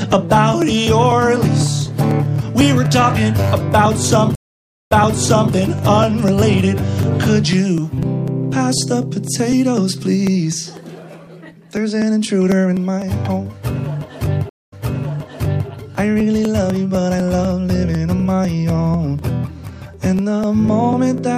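A driver or USB stall every 0.25 s skips roughly a millisecond of audio, giving periodic USB or driver dropouts as steady ticks from 0.12 to 21.18 s. At 4.35 s a stream reconnect leaves 554 ms of silence, then resumes 0.63 s earlier. A second reconnect at 14.49 s goes silent for 224 ms and repeats 0.97 s of audio.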